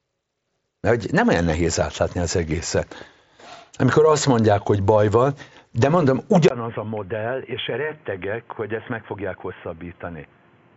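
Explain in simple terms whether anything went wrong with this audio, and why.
Input switched to a poorer device, at 6.48 s, right after "baj van de mondom": a brief gap, then the sound turns dull and boxy, noticeably quieter, with new background hiss and nothing above 3.4 kHz. That likely means recording jumped to a narrower, noisier microphone until the end.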